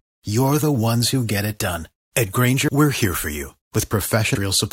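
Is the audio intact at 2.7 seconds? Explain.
No. At 2.67 s the speech jumps ahead, because compressed frames were skipped, dropping roughly 300 ms of audio, about fifteen 23.2 ms frames.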